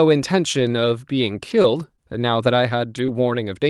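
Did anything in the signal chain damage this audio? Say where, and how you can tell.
Yes: scattered short gaps between 0.59 s and 3.10 s, a network and jitter-buffer fault on the call path (which carries an Opus codec with the top end limited near 12 kHz). About three small holes, the longest roughly 20 ms, show up as brief ticks and smeared hiccups in the speech. Packets arrived lost or late, and the receiver's concealment stretched the preceding sound across each hole, rebuilding around 140 ms of audio in all.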